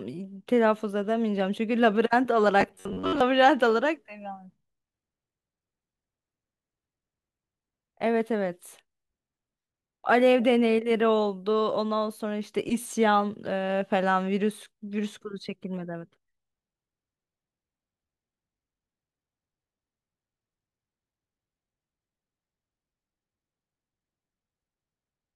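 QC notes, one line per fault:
2.61 to 3.21 s, robotic sound from repeated short buffers: speech turns into a stiff metallic buzz at 93.8 Hz. Likely audio arriving too late, so playback loops a chunk of about 10.7 ms, and roughly half the stretch is repeats instead of real audio.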